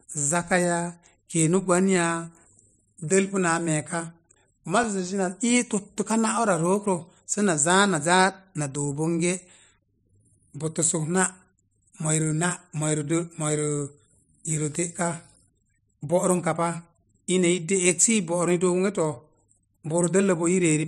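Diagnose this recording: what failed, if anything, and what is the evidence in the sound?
CD scratch ticks, from 3.37 s to 5.08 s. This is a storage and playback fault. Eight short ticks fall across the speech at a steady rate of about five a second, each lasting a few milliseconds. A scratch or blemish on the disc damages more data than the error correction can rebuild. The player then interpolates or mutes the missing samples, and it meets the same damaged spot once per revolution, so the clicks repeat on a regular beat.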